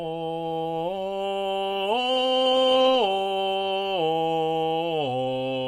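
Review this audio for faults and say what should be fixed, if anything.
Call bitrate drop from 1.69 to 4.54 s: the call's bandwidth estimate fell and the encoder target dropped from 96 to 28 kbps, sitting at its lowest for 1.29 s. The music turns coarse and muffled, losing its high frequencies until the bitrate recovers. Prevent it by stabilising the network path and setting a higher minimum bitrate for music, so the encoder is never pushed this low.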